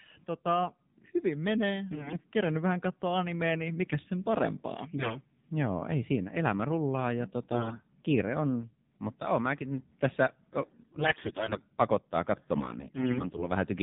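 Throughout, the AMR narrowband mobile codec caps the band at 4 kHz, and its plainly buzzy, synthetic timbre fits a low mode around 7.4 kbps. AMR bit errors at 1.92–2.17, 4.97–5.18, 7.52–7.87, 10.60–11.60 and 12.56–13.43 s scramble pulse positions and fine parameters, so the speech keeps its pitch and level but turns hoarse and gargly.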